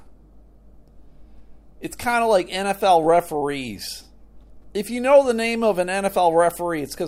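From the very start and all the way through, there's a steady mains hum sitting under the speech, a low drone at 50 Hz with a few low harmonics stacked above it. That's the power line leaking into the signal, most likely through a ground loop or a transformer close to the cabling. It sits roughly 30 dB below the speech, so it's quiet but constant, and it's easiest to catch in the pauses.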